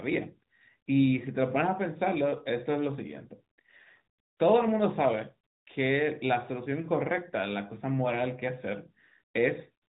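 No technical faults can be heard in the speech. It has passed through the AMR narrowband mobile codec, so nothing above 4 kHz comes through and there is a light synthetic edge that fits the codec's higher-bitrate mode, around 12.2 kbps.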